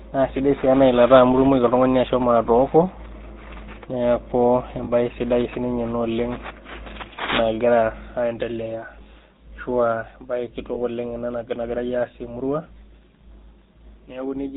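Throughout the speech a buzzy, gravelly roughness sits on every sound, and nothing reaches above 4 kHz. This is the GSM full-rate codec, which fits a 13 kbps stream. It rebuilds the voice from a vocal-tract model driven by regularly spaced pulses.

At 4.84 s, just before "sidai sininye ena oleng", the sound briefly freezes into a rough, metallic ring for about 0.05 s. A shorter ring follows at 10.74 s. These are lost GSM frames: the decoder repeated the last good frame, fitting roughly two frames and one frame.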